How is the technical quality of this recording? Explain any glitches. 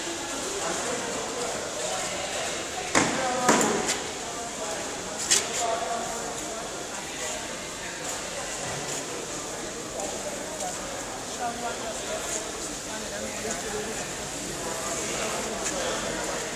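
No technical glitches can be heard anywhere in the recording, and the signal stays steady and continuous throughout.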